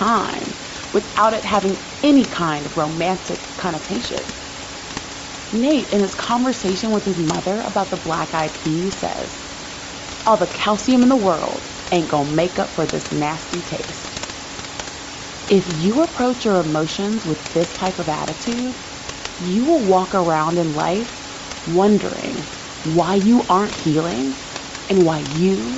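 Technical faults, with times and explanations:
Throughout, Bluetooth LC3 compression: the speech carries a plainly audible grainy edge as upper frequencies are dropped and refilled with noise, likely LC3 at a rate fitting 32 kbps with 7.5 ms frames; unlike the room noise about 10 dB down, this grain follows the voice.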